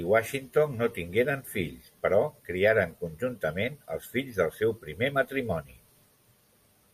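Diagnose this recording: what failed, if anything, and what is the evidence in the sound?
Nothing failed in this recording.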